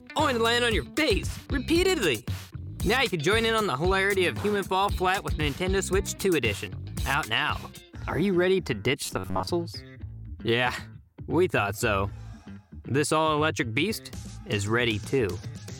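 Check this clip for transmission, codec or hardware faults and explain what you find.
One fault turns up. From 9.06 to 9.48 s there's robotic sound from repeated short buffers: the sound collapses into a rigid metallic buzz at about 94 Hz. That's likely a tiny chunk of roughly 10.7 ms being looped, replacing most of the real audio.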